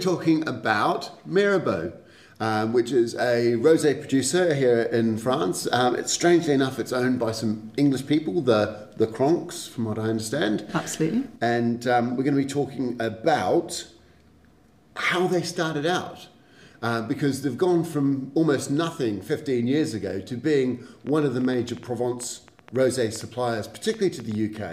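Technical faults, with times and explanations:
21.07–24.58 s, train of clicks: something, likely interference from nearby equipment or a faulty connection or power supply, injects short pulses at about 7.4 per second with uneven spacing, about thirty in all. They stand out as irregular ticking roughly as loud as the sound itself.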